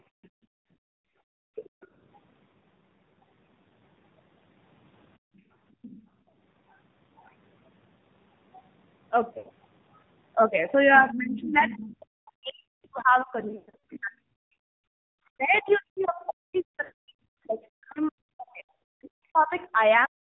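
The whole clip has been through the AMR narrowband mobile codec at 7.4 kbps, and the codec damage is plainly audible. It sounds boxy and buzzy, a bit synthetic, because the codec rebuilds the speech from a crude vocal-tract model and drops everything above 4 kHz.

From 0.09 to 1.81 s, and again from 5.18 to 5.5 s, the background is gated by the echo canceller. The room sound drops by up to about 37 to 38 dB while the far end plays, then comes back when the canceller releases. In the first stretch it's gone for about a second and a half.

The other side's voice leaks through in scraps at 0.23–0.28, 1.55–1.87, 5.82–6.01, 10.95–11.82 and 15.72–16.05 s. Some of those are very faint, and the one around 11 s sits only about 10 dB under the speech. It's likely loudspeaker echo the canceller didn't fully remove.

There are lost AMR speech frames at 9.38–9.5 s, about 80 ms, which fits roughly four dropped 20 ms frames. 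The decoder repeats its last good settings and fades them, so you get a short drawn-out warble or dip. A worse patch runs from 13.48 to 13.79 s, where 280 ms is lost across about 360 ms with runs up to 120 ms long, so it sounds smeared and choppy. A shorter 60 ms one follows at 16.84–16.92 s.

From 11.0 s to the end, the speech is suppressed in double talk, likely because both sides were talking and the canceller ducked everything it couldn't separate. The voice dips by up to roughly 40 dB and cuts out in pieces over about seven seconds.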